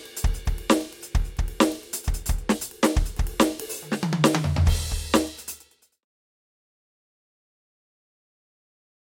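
This is a music clip, and nothing is technically wrong with it.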